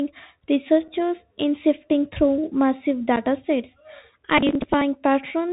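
The whole clip carries the Bluetooth CVSD headset codec. Nothing above 4 kHz survives. Sibilants turn scratchy, and a granular hiss sits under the speech.

At 0.88 s, just before "in sifting through massive", comes unconcealed Bluetooth headset packet loss. About 7.5 ms drops out, which fits a single lost packet. It leaves a hard-edged hole. The same fault returns at 3.16 s, just after "in sifting through massive".

From 4.38 to 4.81 s there is processor overload crackle. Roughly thirty short buffers, around 10 ms each, missed their deadlines and were skipped. The result is a gritty, tearing burst of crackle.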